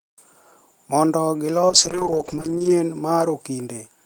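From 1.71 to 2.79 s there's a call bitrate drop: the speech turns rough and muffled, which fits the encoder falling from 32 to about 9 kbps.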